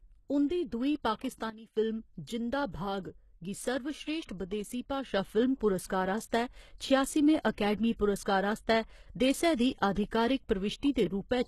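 Throughout, the speech carries plainly audible HE-AAC compression damage. Nothing reaches above 12.3 kHz, and the treble is rebuilt from copied lower bands, so its harmonics do not line up with the originals. This points to a bitrate of about 16 kbps, likely HE-AAC.

At 1.50 s a sudden gain jump drops the level by about 14 dB, and at 1.77 s it returns. At 5.13 s a second jump raises the level by about 6 dB, and it stays there until the end. Speech and background noise shift together at each step, which likely means a gain change was applied with no ramp.

From 5.88 to 5.90 s, pre-echo adds about 21 ms of hiss just ahead of a sharp attack, and the attack itself sounds smeared. The codec spread its quantisation noise across the whole block, so the quiet moment before the onset is filled with noise sized for the loud part.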